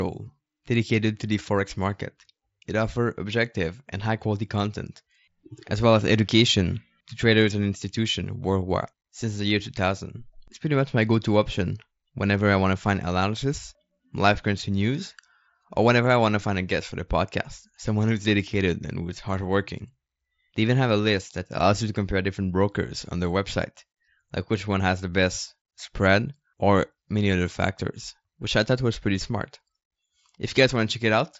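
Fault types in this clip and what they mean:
No faults turn up here; it's just speech carried over a Bluetooth mSBC headset link, with nothing above about 7.7 kHz.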